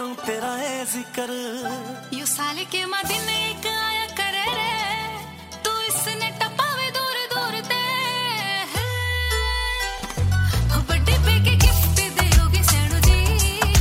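Chunks out of order at 0.44–0.48 s and again at 9.98–10.02 s: one 20 ms chunk lands a chunk late, swapping places and leaving a brief jumbled blip at the hard joins.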